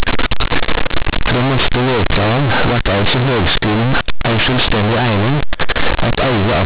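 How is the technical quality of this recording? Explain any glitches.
Quality is poor: the speech is very loud and harshly buzzy from start to finish, and the pauses are filled with heavy noise rather than silence.

Across the whole clip, this is companded audio read as linear. The recording is G.711 telephone audio (mu-law, 8 kHz, so nothing above 4 kHz), but the mu-law bytes are played back as plain linear 8-bit samples without expansion. Every sign change then jumps across about half the output range, so quiet passages come out as large as loud ones and the waveform is badly misshapen.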